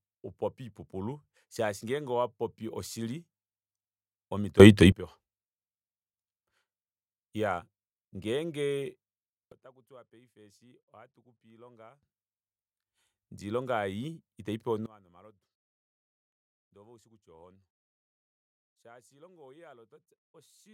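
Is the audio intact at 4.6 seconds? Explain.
No. From 4.60 to 4.92 s there is a sudden gain jump of about 21 dB. The speech and its background noise rise in level together in one step, likely from a digital gain setting applied between adjacent samples without a ramp.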